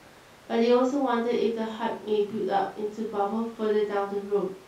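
A speech recording with no audible technical faults anywhere in the signal.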